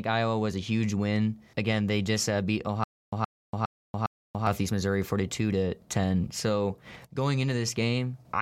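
From 2.84 to 4.47 s, stutter with silent gaps: a 120 ms speech fragment repeats four times, each followed by 287 ms of dead silence, likely a stalled stream.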